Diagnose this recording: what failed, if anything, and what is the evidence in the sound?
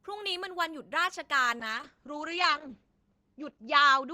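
What failed is a call bitrate drop at the codec stage. From 1.61 s to the end the speech goes coarse and muffled, with the top end falling from 20 kHz to 8 kHz. That points to the encoder being squeezed from around 40 kbps to about 8 kbps, and it never recovers.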